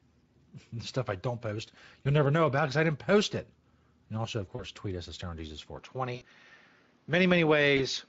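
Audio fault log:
2.03 s, 4.55 s, 6.15 s and 7.77 s: VoIP packet loss concealed by the speech codec. Short smears stretch the sound and fade, just after "stuff I don't post" and "also of". The decoder bridged gaps of about 20, 40, 60 and 20 ms, which fits one, two, three and one lost 20 ms frames, by extrapolating its last pitch and filter.
5.79 s to the end: input switched to a poorer device. The sound turns duller at once, with no gap and no clear level change. Nothing remains above 6.7 kHz, and a faint new noise floor sits around 45 dB below the signal, likely from a narrower-band microphone taking over.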